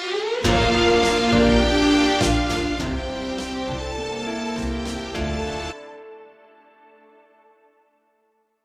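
At 5.67 s the sound jumps abruptly ahead with a short blip, ending by 5.73 s, and the material that should have continued simply isn't there. The likely cause is a stream segment skipped: one chunk of the segmented stream failed to load, so the player carried on from the next.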